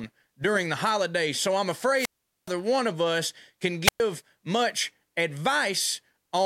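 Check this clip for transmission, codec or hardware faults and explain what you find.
Two wireless microphone squelch dropouts turn up in the speech. The first runs from 1.94 to 2.53 s and the second from 3.84 to 4.0 s. In each, the analogue FM link's signal sags far enough that the receiver's squelch shuts the output off. You get a short swell of hiss, then a hole of near silence, about 420 ms in the first case and only about 115 ms in the second, before the audio comes back.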